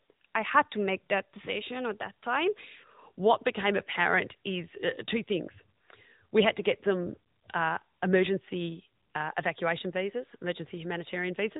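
From start to finish the speech has passed through the AMR narrowband mobile codec, the AMR-NB coder of 2G and 3G phone calls. It resamples to 8 kHz and rebuilds the voice from a vocal-tract model fed by a handful of pulses in each 5 ms, so nothing above about 3.8 kHz survives. The damage is plainly audible: a muffled, boxy telephone tone with a buzzy, synthetic edge, consistent with a mid-range mode around 10 kbps.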